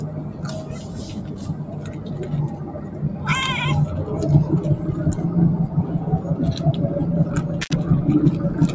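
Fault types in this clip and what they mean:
Noise suppressor applied to music or sounds: A noise suppressor built for speech stays active across the whole clip. It mistakes sustained tones, ambience and decaying tails for background noise. It pushes them down by around 10 dB, then lets them back up. Attacks get through largely intact. Held parts and tails sink away behind them. The level keeps swinging, so the sound pumps and thins out where it should sustain.
Intermittent contact: Near the end, between 7.61 and 7.73 s, a connection briefly opens. The sound drops out for about 67 ms. Crackle marks each edge of the gap as the contact breaks and then closes again. While the line is open, a faint hiss remains. The audio then snaps back abruptly. This short, scratchy dropout points to a loose plug or cable.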